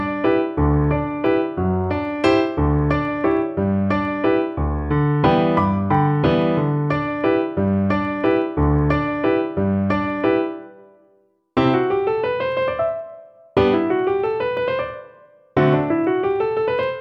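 Clock slip clicks run from 0.11 s to 16.99 s: faint ticks recur about twenty times a second, fast enough to merge into a soft rattle, a few hundred in all, each a single-sample step. The likely cause is two devices running on separate, unsynchronised clocks that disagree by around 400 ppm, so a sample is dropped or repeated whenever the drift reaches a whole sample, producing a steady, regular slip rate.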